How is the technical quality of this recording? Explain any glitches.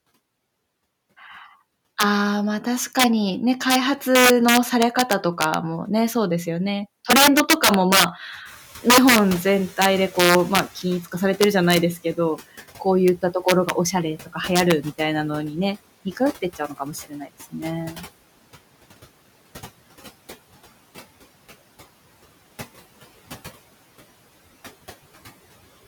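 The recording has serious technical problems: harsh digital cracks on loud speech, plus several audible errors from the noise suppressor.

Integer overflow runs through the whole clip. The loudest speech peaks are driven about 8 dB past the top of the integer range. A gain or sum there wraps to the opposite sign rather than being limited. Only around half a percent of samples go over, but each one jumps across the full range. The result is sharp, violent cracks on loud syllables, far harsher than ordinary clipping.

Noise suppressor artifacts are also present throughout. The suppressor pulls down the bands it judges to be steady noise, frame by frame, by about 17 dB. The background therefore drops in the pauses and swells back underneath the speech.

At about 8.5 s the room noise jumps by about 22 dB and then sits roughly 19 dB below the speech. From 8.45 to 11.95 s the noise suppressor is catching up. 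Its noise estimate lags the sudden rise, so the louder background passes through with less reduction at first. It then sinks over about 3.5 s as the estimate adapts, finally settling at a cut of about 13 dB.

Speech is cut by the noise suppressor in two places. Between 16.05 and 17.55 s, around half a second of speech in total is mistaken for noise and drops by up to about 16 dB. From 17.91 to 18.06 s, a further 150 ms or so is pulled down by about 10 dB. In both spots soft sounds and endings are attenuated along with the background, so they come across as swallowed or faint.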